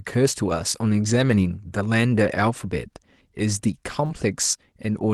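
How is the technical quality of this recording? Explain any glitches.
The recording comes through an Opus call path with audio running up to about 12 kHz, and it has two brief, overlapping glitches near the end, between about 4.05 and 4.15 s.

Short concealed packet loss, 4.05 to 4.11 s: a quick smear or wobble where about 40 ms of audio never arrived. The receiver covered the hole with 39 ms of invented sound, extending the preceding sound's pitch or noise, then blended back into real audio.

Lost packet rebuilt from error correction, 4.09 to 4.15 s: a rougher, noisier patch lasting about 40 ms. This fits two lost packets whose low-bitrate backup copies, carried in the following packets, were decoded in their place. That avoids a gap but sounds coarser.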